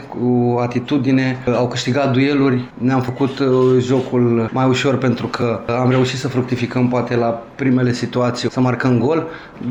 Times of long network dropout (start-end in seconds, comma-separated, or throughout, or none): none